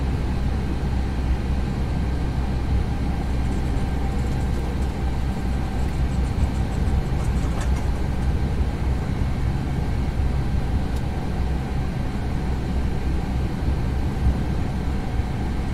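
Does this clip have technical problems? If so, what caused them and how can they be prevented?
No, the signal shows no technical faults, so nothing here needs a cause or a preventive step.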